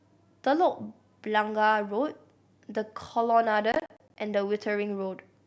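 From 3.72 to 4.16 s the speech breaks into processor overload crackle: the processor misses around ten deadlines for buffers of about 20 ms, each leaving a hard-edged silent gap. It sounds gritty and torn. The waveform shows abrupt flat dropouts, and the spectrogram shows vertical broadband streaks.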